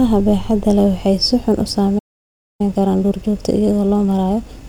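A playback stall runs from 1.98 s to 2.61 s: the speech halts mid-flow and the output falls completely silent for about 0.61 s before resuming. The abrupt cut and the clean return point to the player being starved of data or having its output thread blocked, most likely while it waited for audio that had not yet arrived. The gap registers clearly as an interruption rather than a natural pause.

Time-compressed catch-up follows at 2.61 s and continues to the end of the clip. Having fallen behind during the stall, the player works through its backlog by trimming short slices from the signal and cross-fading across the joins. The result plays at 1.15 times normal speed while the pitch stays where it should be. The speech sounds hurried.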